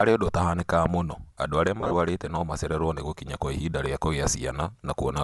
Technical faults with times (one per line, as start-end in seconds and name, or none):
0.00-5.23 Bluetooth LC3 compression
1.81-1.94 lost LE Audio frames